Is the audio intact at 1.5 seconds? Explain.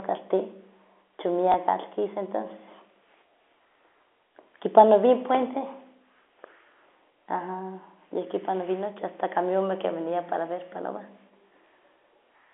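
No. At 1.52 s there is a small blip, as a sliver of sound repeats for about 20 ms. This is packet loss with last packet repeated. The gap fits a single lost 20 ms packet. The receiver filled it by replaying the preceding packet. The one repeat is too short to build into a sustained buzz.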